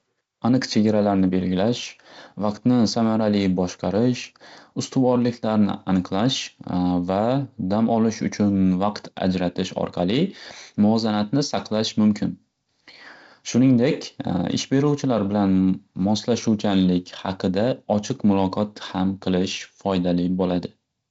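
Nothing here counts as a fault: the speech simply carries the usual character of G.722 wideband telephone coding at 48 kbit/s, with the top end stopping around 7.7 kHz and a faint hiss in the upper band that's just part of how that codec sounds.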